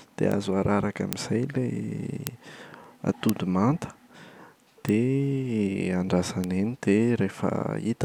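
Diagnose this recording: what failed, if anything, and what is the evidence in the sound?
The speech carries bit error spikes, a digital fault in memory, storage or a digital link. Single sharp ticks sit at 0.32, 1.13, 2.27, 3.29, 4.89 and 6.44 s. Those at 1.13, 2.27 and 3.29 s peak at about -1 dBFS. The others reach about -13 dBFS. The tick at 6.44 s spans two samples, the rest one. One flipped bit throws a sample by a power of two, then it snaps back. The result is broadband and unrelated to the speech.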